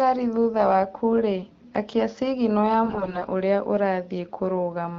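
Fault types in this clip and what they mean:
AMR bit errors: flipped low-priority bits in the AMR frames misplace the excitation pulses and skew fine pitch, gain and spectral values. From 2.86 to 3.28 s, after "wakurĩ akia cigino ya", speech turns hoarse and gargly but keeps pitch and level, unlike packet-loss gaps.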